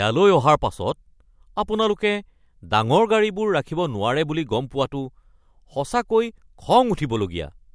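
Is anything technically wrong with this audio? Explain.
No, there's no technical fault.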